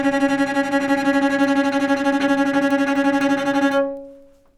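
Word clock ticks run from 0.17 s to 4.48 s through this recording of sounds. About twenty sharp ticks of uneven strength fall roughly every 0.3 s. That steady rate points to a receiving device clocked independently of its digital source, drifting by around 70 ppm and slipping about one sample at each tick.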